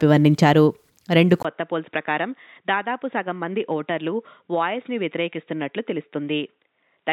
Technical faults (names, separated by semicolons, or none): input switched to a poorer device